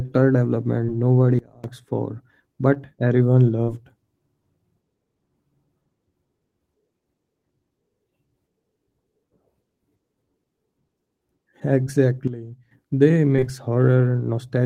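Short concealed packet loss first strikes at 0.85 s: about 20 ms of the speech never reached the decoder, and the receiver bridged the gap by extending the preceding sound before fading back, leaving a brief smear. At 1.39 s a sudden gain jump, likely an unramped digital gain change, drops the speech and background together by about 24 dB until 1.64 s. Further concealed losses follow at 2.74 s, 3.63 s (a 40 ms gap, so a longer wobble) and 11.84 s. A second gain jump cuts the level by about 12 dB from 12.28 to 12.71 s. From 13.36 to 13.48 s, three losses in a row give a sustained smeared stretch.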